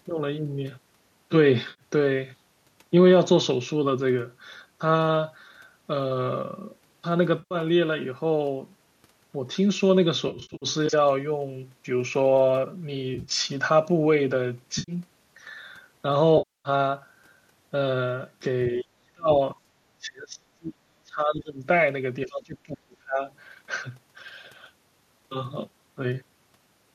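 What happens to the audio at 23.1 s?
At 23.1 s you're near the tail end of a stretch, from about 22.25 to 23.22 s, where the talker gets pushed down hard, by roughly 30 dB at the deepest point. That's most likely speech suppressed in double talk. Both ends were talking at once, and the echo canceller couldn't tell the local voice apart from loudspeaker echo, so it clamped down on everything. For about a second the speech sounds choked and patchy before it comes back.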